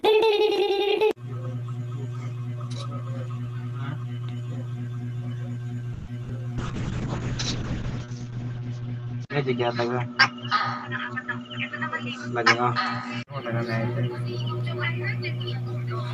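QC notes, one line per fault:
5.93–6.09 s, call audio freeze: the sound doesn't cut out. It stretches into a fading buzzy tail for about 140 ms and then carries on from exactly where it stopped, so nothing is lost, just a pause pushed into the stream. That's the receiver extending the last bit of sound while it waited, most likely because packets got held up in transit and the jitter buffer ran dry. The stream ends up about 140 ms further behind.
6.23–6.26 s and 6.28–6.31 s, short concealed packet loss: two quick smeary blips right after the freeze. In the first, about 20 ms of real audio never made it and roughly 10 ms of patch covers the hole. In the second, about 40 ms went missing under a similar short patch. The decoder keeps the previous sound going and blends back in, so you hear a tiny smear or wobble, and short transients there can drop out. Together they take back around 30 ms of the added delay.
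6.59–13.32 s, call bitrate drop: the sound goes rough and muffled as the encoder rate falls from 40 kbps to 6 kbps, with the audio band shrinking from 20 kHz to 8 kHz. It sits at the bottom rate for about 1.3 s. That's the bandwidth estimate collapsing and Opus being forced to code coarsely with far fewer bits, losing the top end, until the rate climbs back.
11.12–11.38 s, 12.04–12.75 s and 13.32–14.39 s, jitter buffer speed-up: the sound runs faster with the pitch unchanged. The first stretch plays at 113%, and the other two at 105%, trimming around 40 ms, 40 ms and 70 ms respectively. The buffer had more queued than it wanted, so it kept snipping out pitch-period-sized slices to shed delay, which gives that hurried feel.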